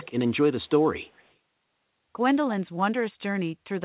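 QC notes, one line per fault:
0–0.07 s, 0.65–0.85 s and 1.04–1.31 s, echo leak: faint delayed copies of the speech trailing the talker by about 240 ms. The first one is the loudest, roughly 25 dB down. The later two are much quieter, about 35 to 40 dB under the voice. The likely cause is a far-end loudspeaker whose echo canceller let some of the mic pickup slip back into the call, all of it sitting inside the band-limited, sub-4 kHz call sound.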